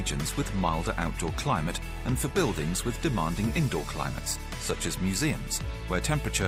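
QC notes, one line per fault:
0.0–4.98 s, adaptive stream starting at a low bitrate: treble is thin and coded-sounding, consistent with a 24 kbit/s Opus start, until the player steps up to 64 kbit/s without a gap.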